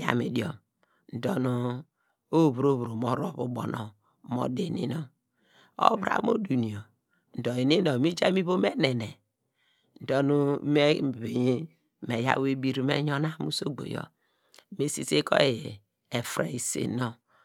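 Nothing goes wrong anywhere in this speech recording, so there's no technical fault to point to at any moment.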